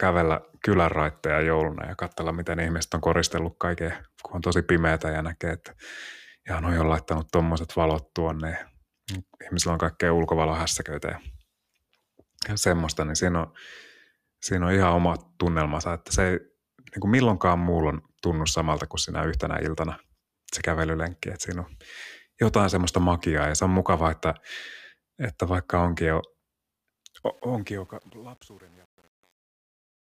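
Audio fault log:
27.23–30.19 s: truncation distortion on a fade. As the speech fades out toward 30.2 s, the gain stage keeps too few bits and adds no dither, which fits an 8-bit path. From 27.48 s the tail breaks into coarse square steps, sounding gritty.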